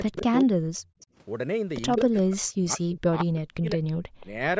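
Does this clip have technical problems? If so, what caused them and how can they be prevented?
Yes. Speech is suppressed in double talk at 0.09 to 0.89 s, 1.98 to 3.81 s and 4.19 to 4.32 s. The voice drops in pieces, by around 40 dB at its deepest in the first two stretches and only about 10 dB in the last. The likely cause is an echo canceller that can't separate the local talker from loudspeaker echo while both sides talk, so it turns everything down. This differs from a dropout or a network gap: the sound thins and ducks rather than vanishing cleanly, and only while the far side is also active. Prevention: use a headset, or an echo canceller with better double-talk detection.

Echo leak appears at 0.17 to 0.44 s, 1.01 to 1.06 s, 1.92 to 2.22 s and 3.87 to 4.26 s. It is a faint copy of the voice, about 25 to 30 dB below the speech, trailing it by a steady 176 ms. The likely cause is residual loudspeaker pickup that the far end's echo canceller didn't fully remove. 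Room reverberation would smear continuously; this instead returns as a distinct, fixed-delay scrap. Prevention: lower the loudspeaker volume or move to headphones.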